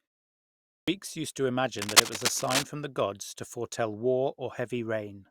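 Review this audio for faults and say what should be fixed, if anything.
Two things need fixing here. First, there's a clipped start after a pause at 0.65 s. The clip opens with about 0.65 s of silence, and when the speech comes in, roughly the first 0.23 s is missing, up to 0.88 s, so the opening sound lands abruptly with its start shaved off. That's the playback device dozing during the quiet lead-in and not being awake or locked in time to pass the beginning through. To prevent it, keep the output stream open, or send low-level signal through quiet stretches so the device never drops into its sleep state.

Second, there's cable scratch noise from 1.79 to 2.63 s: a dense, ragged burst of scratchy rustle sitting over the speech, around 5 dB louder than the talker, so it's hard to miss. It sounds like intermittent contact somewhere in the chain, most likely a worn cable, connector or control being moved while its contact resistance jumps around. 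To prevent it, replace or reseat the suspect cable and connectors, and keep leads and controls still while recording.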